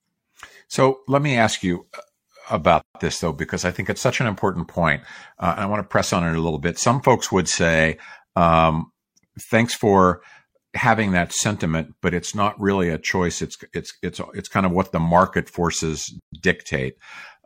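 At 2.81 s the speech drops out for about 137 ms, until 2.95 s, then picks up with "this though because I". It happens again after "what the market forces", from 16.19 to 16.33 s, about 132 ms. Both are a gap at a join of encoded pieces. The segments were encoded separately and butted together untrimmed, so encoder start-up delay and last-frame padding stayed in. You hear a hole with smeared edges before the speech carries on.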